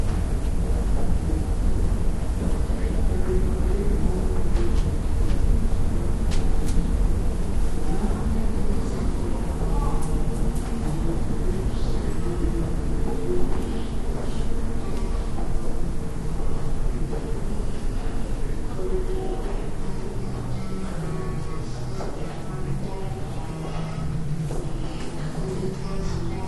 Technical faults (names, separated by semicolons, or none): wrong sample rate